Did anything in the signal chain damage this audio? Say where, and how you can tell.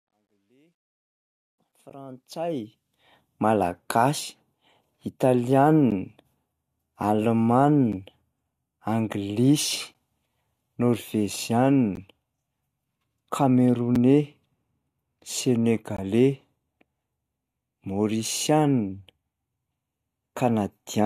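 Yes. The fade-in over the first 3.20 s shows truncation distortion on a fade in the sample-format conversion stage. It's gritty from 0.00 to 1.42 s, where the level sits near the lowest step. That fits an undithered path keeping about 12 bits, which turns the waveform into coarse square steps.

There are also gaps between stream segments, coming from network or playback. Short hard-edged silent holes of roughly 6 to 19 ms land at 1.90, 3.91, 5.91, 7.92, 9.94, 11.95, 13.95 and 15.97 s. That's every 2 s, where mismatched segment timestamps leave silence inserted at each boundary.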